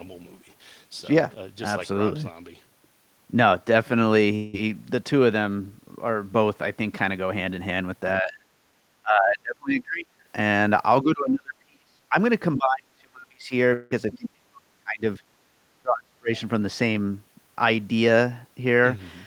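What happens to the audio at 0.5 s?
Nothing goes wrong at 0.5 s; the audio runs on intact through that moment, with no dropout, click or distortion to be heard.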